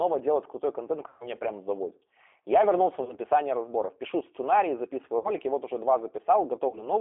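Throughout, the speech sounds narrow and slightly rough and synthetic, confined to a telephone band of roughly 300 Hz to 3.4 kHz, with plainly audible coding damage. This is the G.729 codec at 8 kbit/s, which rebuilds speech from a vocal tract filter, a pitch predictor and sparse pulses rather than the original waveform.

VoIP packet loss concealed by the speech codec appears four times. At 1.08 s, after "делать крутой контент", about 120 ms goes missing. The sound smears into a buzzy tone or coloured noise that fades, and stays weak until around 1.29 s, before "прям заводит". Shorter gaps follow: 40 ms at 3.03 s, with distortion lingering to 3.16 s; 60 ms at 5.18 s, after "сценарии записываю", recovering by 5.31 s; and 40 ms at 6.69 s, settling by 6.88 s. In each gap the decoder extends its last pitch and filter at falling gain. Because each frame builds on the previous one, the distortion lasts beyond the loss itself.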